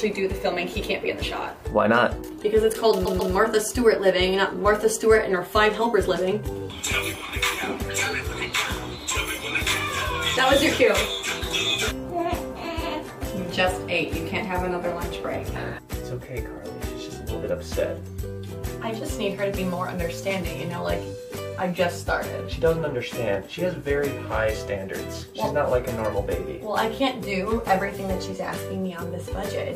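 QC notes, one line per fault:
3.04–3.32 s, repeated frames: a block of compressed frames was sent or written more than once, so the decoder plays the same stretch of about 139 ms two extra times in a row. That length fits a run of roughly six codec frames. The result is a stutter where the sound jumps back and repeats before carrying on, and the clip grows longer by about 279 ms, the combined time of the two extra plays.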